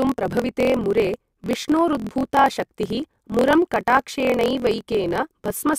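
From start to finish the speech carries a steady buzz at about 43.1 Hz and runs about 1.12 times faster than natural while keeping its timbre. This is a block size mismatch (truncated). One stage hands over longer blocks than the next stage takes in, so the tail of every block is discarded. The buzz comes from the discontinuity at each block boundary, and its rate fits a 1024-sample read size. The speed-up matches the ratio between the written and read block lengths.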